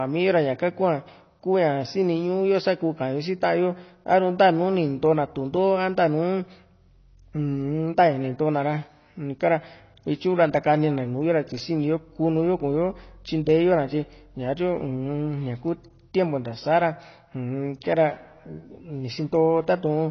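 AAC compression runs throughout the speech, with plainly audible damage from start to finish. Nothing is present above about 6.6 kHz, so the top of the spectrum is simply missing and the speech sounds dull and muffled. The likely cause is AAC-LC at a low bitrate, around 24 kbps, where the encoder lowers its cut-off and quantises the remaining frequency lines coarsely, smearing consonants and giving sibilants and sustained sounds a warbling, fizzy texture.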